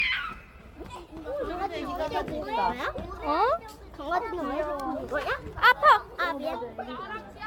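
Generation loss runs through the whole of this everyday-sound clip, from start to finish. The audio has a swirly, smeared, hollow quality beyond what one lossy encode would leave, with attacks blurred and nothing above about 17 kHz. It likely comes from repeated AAC-LC re-encoding, around seven passes at a rate that points to 96 kbit/s. Each pass requantises on a shifted frame grid, so noise and spectral gaps pile up.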